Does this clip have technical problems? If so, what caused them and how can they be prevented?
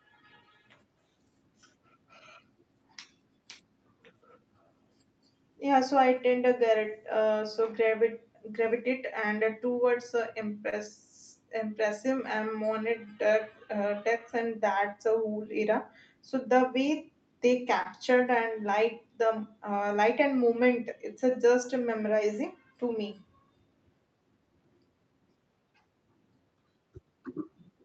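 Yes. Clock drift between sender and receiver runs through the whole clip. The sender's clock is roughly 2 percent slow, so the jitter buffer keeps draining and the receiver has to stretch the audio to keep playing. Unlike network loss, the problem is steady and one-directional rather than random, and it persists after the loss ends. To prevent it, the receiver should run adaptive resampling that tracks the sender's clock, or both ends should lock to a common clock.

The repeated timing corrections are the direct result. From 0.37 s to 27.50 s the receiver keeps repeating short pieces, playing the audio at about 98 percent speed and adding around 400 ms in total. The edits are small and unevenly spaced but always lengthen the audio. They are heard, if at all, as slight hiccups or an unsteady tempo, not as dropouts. Smooth sample-rate compensation for the drift, instead of discrete repeats, prevents this.

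Scattered short gaps occur between 0.21 s and 17.87 s: about fifteen lost or late packets, each patched by continuing the last sound. Together they fill roughly 150 ms, and none is longer than about 30 ms. They sound like isolated ticks or brief smears. They differ from the timing corrections because they are random, stop before the clip ends, and do not change the tempo. A steadier network path, forward error correction and a slightly deeper jitter buffer would reduce them.

The call path's upper band limit at 8 kHz is expected for this kind of link.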